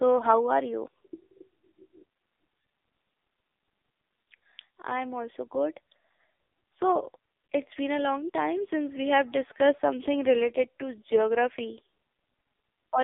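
From start to finish the speech has gone through an AMR narrowband mobile codec, so it sounds like an old 2G call. Everything sits in a phone-line band of roughly 300 Hz to 3.6 kHz, with no air or sibilance on top and no body underneath. The damage is heavy: voiced sounds come out buzzy and synthetic, which points to one of AMR-NB's lowest modes, around 6 kbps. At that rate the vocal-tract model has too few pulses to work with in each frame.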